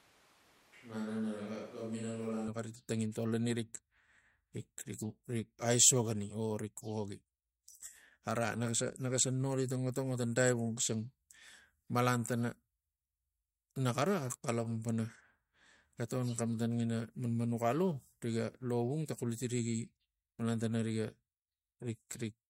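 Switch to a distant microphone from the start of this speech clip until 2.48 s: the sound is hollow, roomy, thin and roughly 5 dB quieter, likely because the close microphone's signal was missing, before snapping back abruptly.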